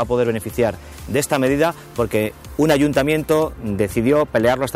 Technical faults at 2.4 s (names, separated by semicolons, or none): pre-emphasis left on